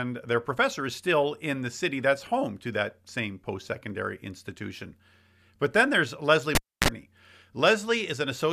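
Cable pulled and plugged in, from 6.55 to 6.88 s: a live lead comes out with a pop, leaving 280 ms of near silence. As it goes back in, only the tip touches at first, giving a 40 ms burst of 60 Hz mains buzz. A second pop follows as the speech returns.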